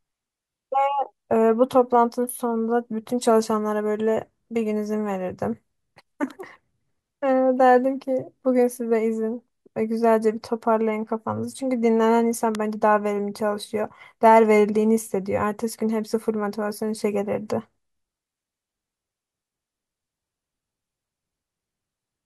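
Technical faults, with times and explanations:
12.55 s, electrical switching spike: a single sharp snap, peaking at roughly -10 dBFS and lasting only a couple of milliseconds, sits on top of the speech. This is likely a nearby switch or discharge arcing, with the burst coupling electrically into the audio line.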